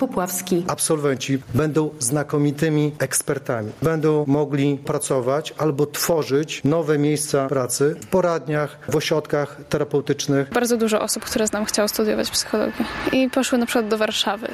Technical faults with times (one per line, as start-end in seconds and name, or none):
0.00-14.53 gain pumping